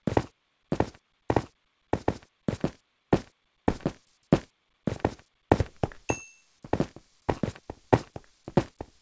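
Nothing stood out on listening; the audio has come through a call path, and the absence of anything above 8 kHz fits a wideband codec such as G.722.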